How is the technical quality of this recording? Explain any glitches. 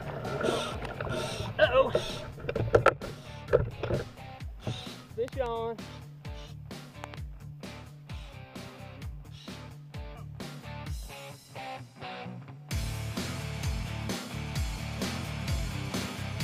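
Two loud pops spoil it, each a quick double. The first lands at about 5.28 to 5.48 s and the second at about 7.04 to 7.16 s, both jumping well above the level of the sound, which carries on underneath. They're most likely sudden voltage spikes from a plug, switch, static or driver hiccup, which the following circuitry rounds off into a sharp thump.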